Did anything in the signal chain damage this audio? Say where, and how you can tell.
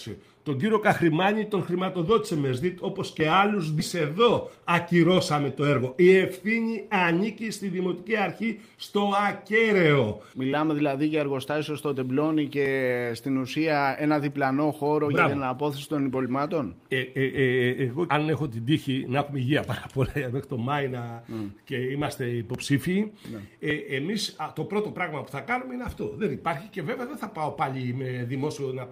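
Yes. At 3.79 s the audio jumps forward abruptly, with no gap or fill, and the two sides are butted almost directly together. About a second of material is simply gone. This is a skip ahead at the network and jitter buffer stage. Later audio was already queued, and the buffer overflowed or the stretch was lost in transit, so the receiver discarded that second and resumed from what it held next. The delay dropped by roughly the same amount.

Right after the jump, from 3.95 to 6.24 s, the audio sounds hurried. It runs at about 108% of normal speed while the pitch stays unchanged, which is the signature of a jitter buffer speed-up. Once delayed packets arrived in a bunch, the buffer held more than its target depth. To drain it, the receiver repeatedly cut out short pitch-period-sized slices, removing around a fifth of a second in total before playback settled back to its normal rate.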